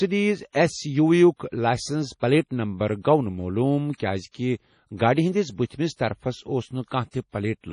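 Throughout the speech, treble stops at 10.5 kHz and weak detail swirls and chirps, likely heavy MP3 compression at a starved bitrate consistent with about 32 kbps. Pre-echo appears at 5.66 to 5.70 s, after "معلوٗم کیٛازِکہِ گاڑِ ہِنٛدِس", and at 6.90 s: quantisation noise spread across the block puts a brief hiss ahead of each attack, softening it.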